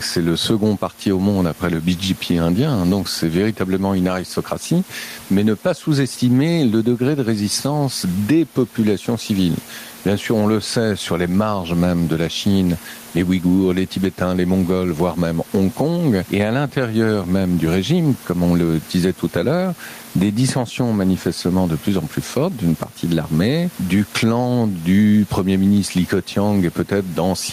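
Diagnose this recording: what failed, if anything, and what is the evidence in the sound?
Gain pumping at the call-processing stage runs throughout: the gain swings around 10 dB, likely an over-high input gain driving a fast limiter. A noise gate would cut the background to silence instead.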